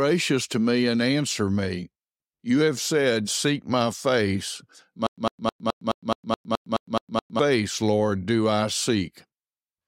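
Right after "my face", from 5.07 to 7.39 s, the speech breaks into a stutter with silent gaps: a 102 ms fragment repeats eleven times, each followed by about 110 ms of digital silence, giving an even 212 ms cycle. The likely cause is a stalled stream replaying its last buffer at each retry. Unlike a seamless loop, the dead-silent gaps separate every burst, and the speech that belonged in those seconds never returns.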